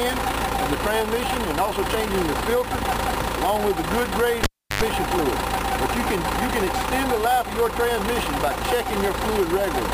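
At 4.43 s a pop cuts the sound to near silence for about 340 ms, with a 92 ms burst of 50 Hz mains buzz, then another pop brings it back at 4.82 s: a cable pulled and plugged in while live, the buzz from a partly seated plug.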